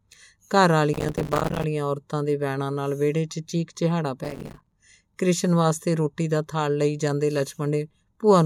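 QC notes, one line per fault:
0.93 to 1.64 s, processor overload crackle. The processor keeps missing deadlines for buffers of around 5 ms. Dozens become silent gaps with hard edges, heard as dense crackle.
4.24 to 4.72 s, processor overload crackle. Again, many short buffers drop to silence in a row. The sound tears grittily until the load eases.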